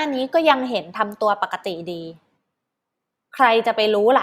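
No technical faults can be heard at any point in the recording.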